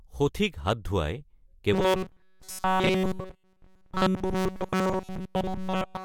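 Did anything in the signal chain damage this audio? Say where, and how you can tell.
Yes. From 1.73 s to the end at 6.05 s, the speech collapses into a rigid, metallic buzz pitched at 188 Hz, loosely tracking the syllables. This is robotic sound from repeated short buffers, likely at the driver or buffer stage: fresh audio arrived too slowly, so every slot was filled by replaying a fragment of about 5.3 ms while real samples were dropped.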